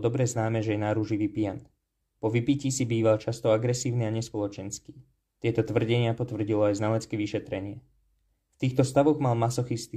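No technical faults can be heard anywhere in this speech recording. There is nothing to point to at any moment in it.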